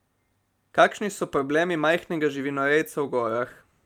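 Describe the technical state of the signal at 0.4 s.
At 0.4 s the signal is intact, with no audible fault at that moment.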